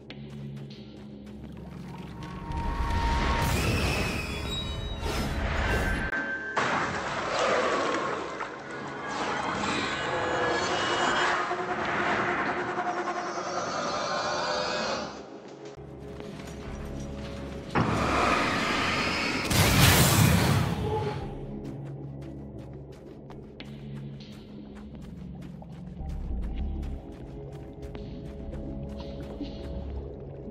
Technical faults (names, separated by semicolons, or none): input switched to a poorer device